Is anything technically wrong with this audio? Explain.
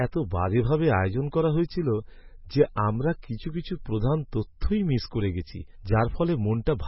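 Yes. MP3 compression damage runs through the whole speech clip, and it is heavy. The encoder seems to have been starved of bits, which fits a rate around 16 kbps, so it likely dropped weak frequency lines that then flicker in and out from frame to frame. The result is a watery, swirling texture with smeared onsets. Nothing is left above 5.6 kHz, so s sounds and other sibilants come out dull and muffled.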